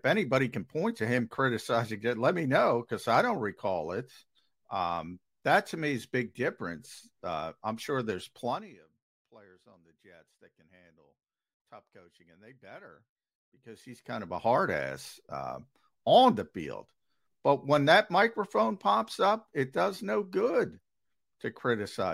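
A gain change was applied in unsmoothed steps, roughly 150 a second, causing zipper noise: a ticking zip as the level falls about 25 dB from 8.44 to 8.80 s, after "I'm sure there's", and rises about 25 dB from 13.43 to 14.48 s, after "coaching and they better".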